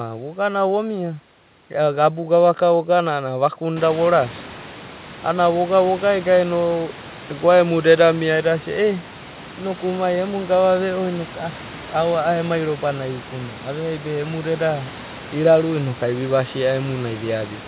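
Nothing's actually wrong here: the room noise that comes up by about 19 dB around 4 s and then sits about 19 dB below the speech is simply part of the recording, and the missing top end above 4 kHz is just what you'd expect from a call path, which fits a 64 kbps G.711 mu-law connection.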